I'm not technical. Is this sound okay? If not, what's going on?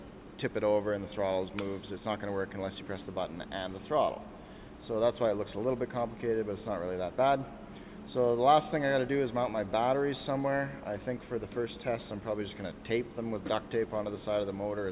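Yes, it's fine; nothing here sounds wrong.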